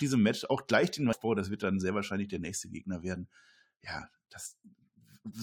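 At 1.12 s and again at 4.45 s the speech is broken by a brief chirp or blip, the mark of damaged data in a compressed stream. Corrupted bytes in the encoded file left the decoder unable to read those frames properly, so it briefly output garbage while hunting for the next valid frame header. On a spectrogram each event appears as a narrow vertical smear of unnatural energy; the waveform shows a short, abrupt discontinuity.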